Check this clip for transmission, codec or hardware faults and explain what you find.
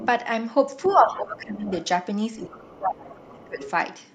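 Two echo-related faults show up in the speech, both typical of a hands-free call where the canceller struggles.

Other side's voice leaking through: a faint second voice sits underneath at 0.00–0.09, 0.83–1.20, 1.68–1.85, 2.38–2.70, 3.32–3.44 and 3.62–3.71 s, roughly 15 to 30 dB below the talker. The likely cause is the far end playing on a loudspeaker and the echo canceller leaving some of it in the microphone signal.

Speech suppressed in double talk: the talker's level sinks at 0.86–1.70 s, by about 15 dB at worst, and at 2.43–3.59 s, by about 20 dB, for roughly 1.7 s in total. Both dips overlap the leaked far-end voice, so the likely cause is the canceller failing to separate the two and turning everything down.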